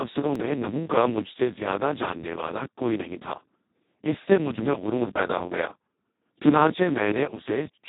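Speex codec damage runs through the whole clip. With very few bits for the excitation, the speech comes out hoarse, noisy and close to robotic, which fits a Speex bitrate near 2 kbps, and nothing remains above 3.8 kHz.

A block of digital silence at 0.35 s, just before "میں نحو کا مجھ", lasts about 0.7 ms. The sound cut out and returned with no fade, most likely because the output buffer wasn't filled in time, so it is heard as a tick or dip.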